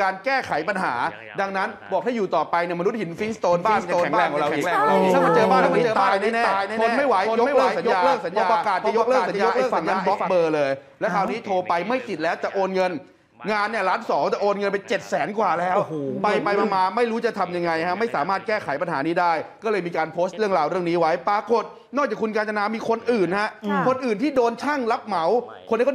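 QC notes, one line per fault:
3.52 to 10.28 s, doubled audio track: a second full-band copy of the sound runs about half a second behind at roughly the same level, with no decay or room colour, and cuts in and out abruptly, likely from the same signal being captured again through a slower path.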